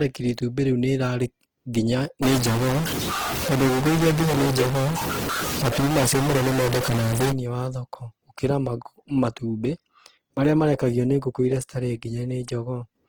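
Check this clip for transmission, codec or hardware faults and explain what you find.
Two faults are audible: codec damage across the whole speech clip, and a burst of bit-level distortion in the middle.

Opus compression, throughout: the speech has a grainy, rough texture, which fits a low-rate Opus stream in its music (CELT) mode, around 16 kbps. Bandwidth stays full, but the encoder keeps band energies and fills starved bands with folded or noise content instead of leaving gaps.

Stuck bit, from 2.23 to 7.32 s: a distortion rides on the speech, and quiet gaps fill with hiss. This is likely one data bit held at a fixed value, which shifts about half the samples by that bit's weight.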